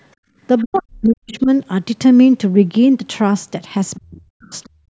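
From 0.16 to 0.37 s the room tone beneath the speech sinks by about 26 dB and then recovers. This is background gated by the echo canceller: while its loudspeaker was active, the canceller pulled the microphone gain down hard, and the ambience collapses for about a fifth of a second. On a waveform the low-level floor pinches almost to a flat line. A spectrogram shows a dark vertical gap across the noise band, with energy still stopping at 8 kHz as the call's microphone processing leaves it.

From 0.58 to 0.80 s a faint second voice sits behind the talker, about 25 dB down. This is the other side's voice leaking through, likely residual loudspeaker echo that the canceller failed to remove. It returns briefly at 1.31 to 1.43 s and again at 3.95 to 4.00 s. A spectrogram shows weak, separate harmonic traces that do not follow the main talker's pitch, and the waveform barely changes.

Overlapping this, from 0.65 to 1.49 s, the talker's own speech dips sharply, by as much as about 40 dB at its worst, and is turned down for most of that span. 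It returns from 4.00 to 4.54 s, right after the last leak. This is speech suppressed in double talk: with both ends talking, the canceller likely could not separate the near voice from the echo and turned everything down. The waveform shows the speech envelope pulled down low. On a spectrogram the harmonics fade.

From 4.82 s to the end the background is gated again, falling by about 38 dB. The floor drops away for roughly the final 150 ms, and a spectrogram shows a clean dark band where the room noise should continue.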